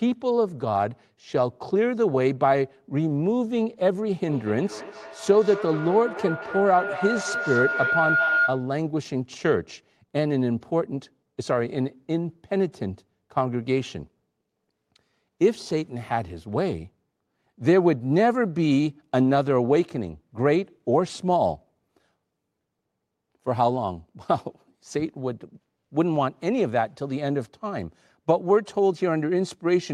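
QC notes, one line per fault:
4.28–8.75 s: feedback howl. A tone near 1.5 kHz swells to about 2 dB below the speech level, with the loop repeating roughly every fifth of a second. A microphone-to-loudspeaker loop gains level on each pass, so repeats grow and narrow onto that frequency.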